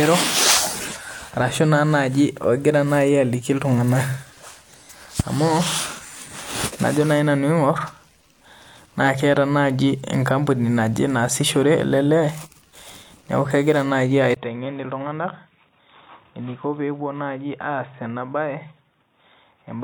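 Right after "neeku kegira naaji", at 14.34 s, a 20 ms gap of silence opens, and from there to the end at 19.84 s the speech turns dull and boxy, roughly 10 dB quieter, over a new noise floor about 40 dB down. This is likely an input switched to a poorer device. On a spectrogram, energy stops abruptly at 3.8 kHz; the waveform shows a brief flat gap, then a smaller envelope.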